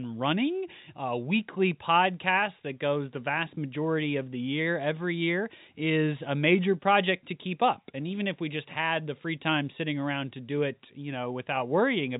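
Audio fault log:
Nothing stood out on listening to this speech, which comes across as ordinary telephone-band audio.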